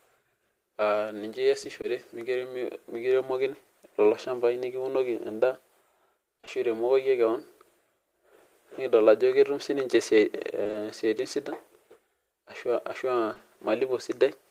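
At 1.81 to 1.85 s there's a short concealed packet loss: about 20 ms never arrived, so the decoder stretched the preceding speech over the hole, leaving a quick smear or wobble. From 6.37 to 6.49 s there's repeated packet loss with a robotic sound: three gaps of up to 20 ms each, about half that stretch patched, so the speech turns choppy with pieces missing. The same thing happens again from 10.63 to 10.75 s. Finally, two short concealed packet losses back to back, from 13.33 to 13.41 s, each fill about 20 ms, giving a slightly longer blurred wobble.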